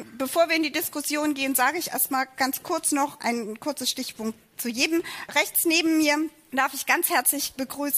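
No technical faults can be heard in this audio.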